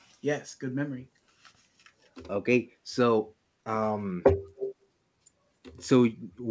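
From 4.56 to 4.75 s, a faint copy of the speech trails 272 ms behind, roughly 10 dB quieter. This echo leak was likely caused by a far-end echo canceller letting loudspeaker sound back.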